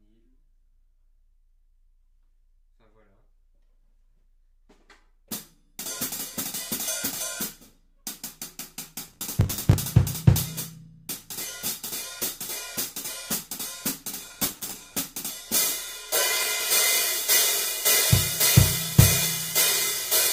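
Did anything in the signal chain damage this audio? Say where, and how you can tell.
Yes: gritty crackle at 9.08–9.74 s and 14.27–14.99 s is processor overload crackle at the buffer stage, as dozens of buffers missed deadlines and repeated old audio.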